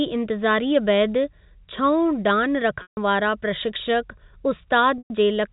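A speech recording carried over G.711 telephone coding, with nothing above 4 kHz. It has two dropouts from packet loss with pitch repetition. Right after "छओं डान", 150 ms is lost from 2.82 to 2.97 s. Another 120 ms goes from 4.98 to 5.10 s. Each time the last pitch period repeats as a brief buzzy hold. It fades over about 50 ms into silence, and then the speech cross-fades back in.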